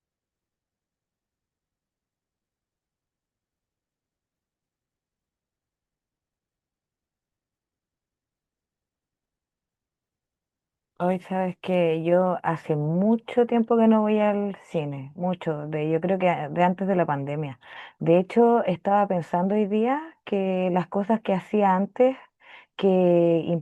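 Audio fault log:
No fault is logged for this speech audio.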